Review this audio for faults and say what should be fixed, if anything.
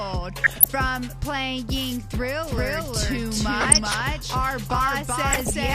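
DAB burbling at 0.36–0.68 s, 3.61–4.01 s and 5.26–5.55 s: bit errors slip past error correction, making single sub-bands jump for a frame. The result is short noise blips, not steady codec swirl. Improving reception or antenna placement would prevent it.

Doubled audio track from 2.45 s to the end: an equally loud, full-band copy trails about 0.4 s behind and starts abruptly, without the decay of an echo. It is likely a second, slower capture path or a misaligned edit. Removing the duplicate path or re-aligning the edit would fix it.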